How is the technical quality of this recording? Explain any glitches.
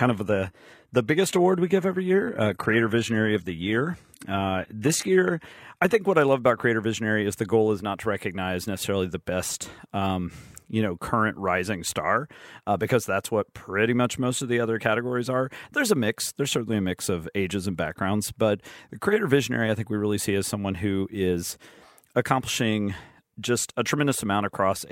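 The recording opens at reduced quality and then improves for the rest of the speech. From 0.0 to 6.0 s, up to "what I love about", it has the sound of an adaptive stream starting at a low bitrate. The treble is thin and synthetic and coding artefacts are stronger. This points to a start at about 20 kbit/s HE-AAC, stepping up to 96 kbit/s AAC-LC. The player began on a cheap stream and upgraded once it had measured the connection. Unlike a dropout or a stall, the quality steps up suddenly with no gap.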